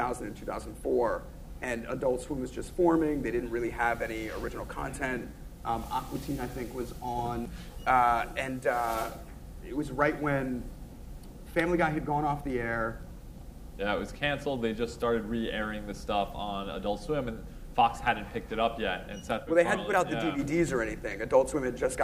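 A corrupt frame decoded at 21.11 to 21.14 s, near the end of the audio, is heard as a short glitch of about 23 ms. Damaged bits in what appears to be a single compressed frame reached the decoder, which played the frame anyway. Misread codes or wrong gains put energy at the wrong frequencies for that frame's length, producing a brief burst that peaks at around -20 dBFS before normal decoding resumes.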